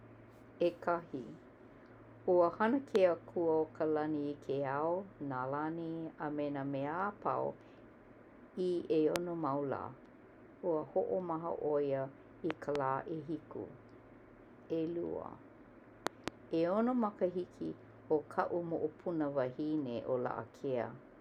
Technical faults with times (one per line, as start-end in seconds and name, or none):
2.95-2.98 loud pop
9.16-9.18 loud pop
12.51-12.77 loud pop
16.07-16.30 loud pop